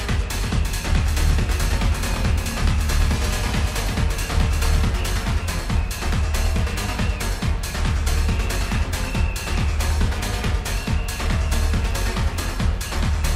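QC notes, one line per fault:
0.38 to 4.90 s, doubled audio track: a second full-band copy of the sound trails the original by around 400 ms, about 5 dB quieter, giving a distinct slapback repeat with no decay or room colour. The copy cuts in abruptly at 0.38 s and drops out just as abruptly at 4.90 s. The likely cause is the same audio being captured a second time through a slower path, or an edit holding two copies out of step.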